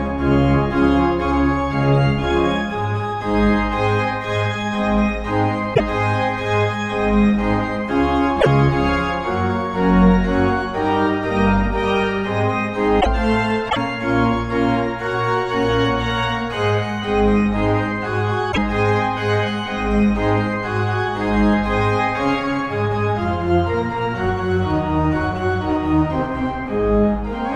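At 5.71, 8.37, 12.97, 13.68 and 18.48 s there's damaged data in the compressed stream, each burst about a tenth of a second. Bad bytes knock the decoder off its frames until it finds the next header, so each spot comes out as a quick chirp, squawk, click or short hole.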